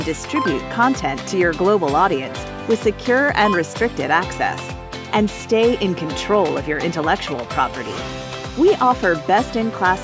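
Nothing is technically wrong with this audio; it has been through a call's microphone processing, which limits it to nothing above 8 kHz and trims the lowest bass, as that processing normally does.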